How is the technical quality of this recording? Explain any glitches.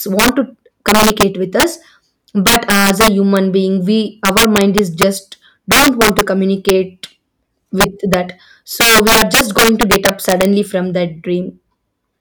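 The technical quality is poor because of integer overflow throughout the speech. The signal is driven about 10 dB past the integer limit, and instead of being held there, every peak that crosses it wraps around to the opposite extreme. Only a few percent of samples go over, but each one snaps across the full range, producing violent cracks on the loudest syllables, far harsher than clipping. On a waveform these show as sudden full-height vertical jumps, and on a spectrogram as sharp broadband streaks.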